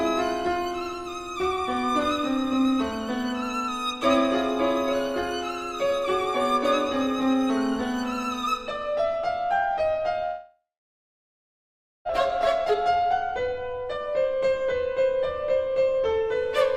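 From 10.25 to 12.11 s a long network dropout is the likely cause: the stream stopped arriving, and the receiver stretched the last sound into a fading buzz or hiss before about 1.4 s of near-silence. About 1.6 s of audio never returns, and playback resumes further on.

From 12.31 to 14.07 s a jitter buffer speed-up follows, as the receiver works off the built-up delay by cutting short pitch-period pieces, roughly 200 ms in total. The audio runs at 111% speed without any change in pitch, so it sounds hurried.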